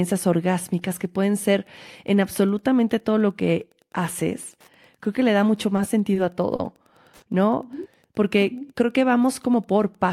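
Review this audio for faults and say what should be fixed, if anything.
Wi-Fi interference runs throughout: a faint tick about ten times a second, every 102.4 ms, roughly 40 dB below the speech, from a nearby radio's beacon being rectified by the audio circuit.

Short stalls from late packets occur at 5.76 to 5.80 s, 6.14 to 6.18 s, 6.56 to 6.61 s and 7.17 to 7.24 s. Each time the jitter buffer ran dry, and the last sound was held for 20, 20, 30 and 50 ms until the packet arrived, with nothing lost.

A jitter buffer slow-down follows from 8.06 to 9.19 s. Repeated pitch periods add 63 ms, so the speech plays at 95% speed at unchanged pitch while the buffer rebuilds its reserve.

To prevent these, move the Wi-Fi radio away from the audio circuit or shield it, and fix the network jitter or start with a larger jitter buffer so it never runs empty.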